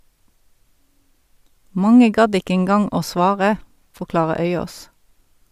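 Nothing stood out on listening to the speech in this recording.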